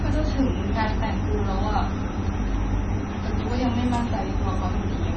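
From start to finish the speech carries heavy damage of the kind that likely comes from MP3 compression at a very low rate, consistent with roughly 22 kbps. Everything above 8.2 kHz is gone, so a spectrogram shows a flat ceiling there. Below it, weak frequency lines flicker on and off between frames, leaving patchy, speckled gaps. The result sounds watery and swirly, with metallic chirps on s sounds and soft, smeared attacks in the waveform.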